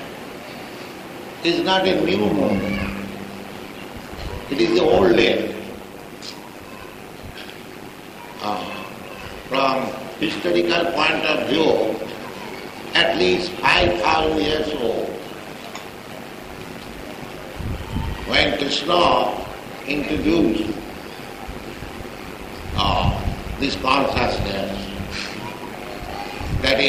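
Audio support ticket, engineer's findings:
Metallic buzz with extra tones around each note, level pumping around 100 times a second, about 11 dB deep. From 1.86 s to end of clip. Overlap-add ripple in frame-based processing stage: windowed frames rejoined with overlap not summing to constant gain, so level dips once per frame.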